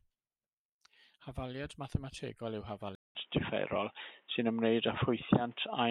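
Right after "mathemategol yw", at about 2.95 s, there's a 200 ms gap and then the speech comes back dull and boxy until the end. Nothing survives above 3.8 kHz, the level shifts by a few dB, and a new noise sits around 40 dB under the speech. That's the signature of the input switched to a poorer device, likely a fallback to a narrower-band mic or a headset call profile.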